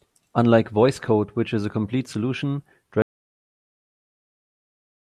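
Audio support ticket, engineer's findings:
Audio dropout to silence from 3.02 s to end of clip. Speech cuts off mid-flow and never returns. Gap is silent, no room tone. Likely input loss, such as a disconnected device, failed link or stray mute, with the recorder writing silence. Content after the cut is lost.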